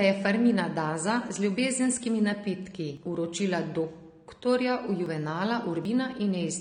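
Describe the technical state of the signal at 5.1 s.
A dropped buffer (overrun) sits at 5.06 s: an abrupt jump where roughly 50 ms of speech has vanished and the surrounding audio is butted together with no gap. The likely cause is the program falling behind, so the hardware overwrote those samples before they were read.

AAC compression colours this moment as it does the whole clip, with a dull, smeared, warbling texture. That is likely AAC-LC quantising its frequency lines coarsely against a hearing model, which fits a low bitrate around 32 kbps.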